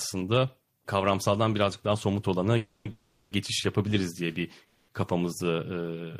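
Speech with three call audio freezes, likely from packets stalling in transit until the jitter buffer ran dry: at 2.57–2.87 s, 2.91–3.33 s and 4.65–4.90 s the last sound stretches into a fading buzz for 280, 400 and 230 ms, then resumes where it stopped, delayed rather than cut.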